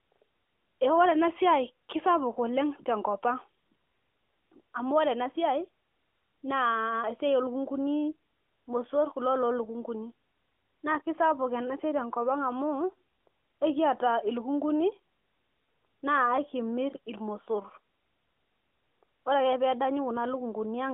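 Speech carried over a narrowband phone line through the AMR narrowband mobile codec, heard in its roughly 250 Hz to 3.4 kHz band with light coding texture that fits the 12.2 kbps mode; no technical fault present.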